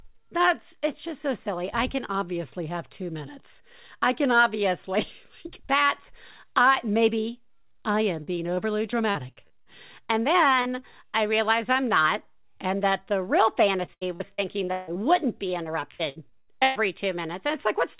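A speech recording carried over a call link, with nothing above 4 kHz, which points to a narrowband G.711-style codec. Repeated packet loss gives a choppy, robotic sound in four stretches: 7.92 to 9.67 s after "that's I maybe", 10.62 to 11.16 s before "realize I'm not and", 13.86 to 14.97 s after "and that the real", and 15.63 to 16.77 s. Packets kept arriving late or not at all. Each hole was patched by extending the last sound. The last two stretches are worst, with roughly a third of each span concealed and gaps up to 157 ms. A short concealed packet loss at 10.07 s is heard as a brief smear. About 20 ms of audio never arrived. The decoder filled it from the preceding sound and blended back into the real signal.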